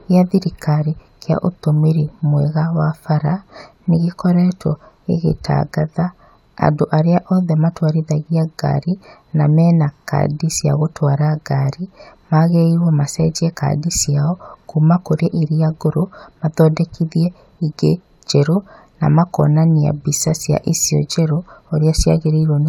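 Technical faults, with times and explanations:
The speech signal shows no technical faults at any point, with its level, timing and continuity holding steady across the recording.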